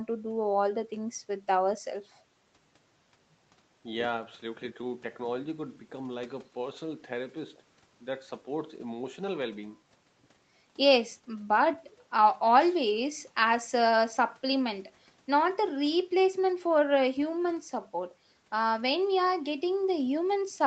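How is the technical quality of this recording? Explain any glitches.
No glitches are audible: the speech has the typical band limit of a call path, with nothing above 8 kHz.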